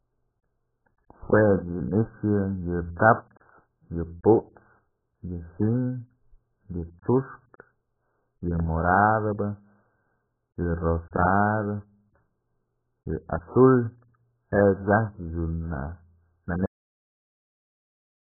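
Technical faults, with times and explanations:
Throughout: AAC compression. The speech sounds heavily dull and smeared, with nothing above 1.8 kHz. The likely cause is AAC-LC encoding at a very low rate, which fits around 8 kbps. Starved of bits, the coder drops the upper band and coarsely quantises what remains.
16.66 s: cut-off end. The speech stops in the middle of a sound and falls straight to silence with no decay. The last buffers were never written or played. Nothing is heard from there to the end.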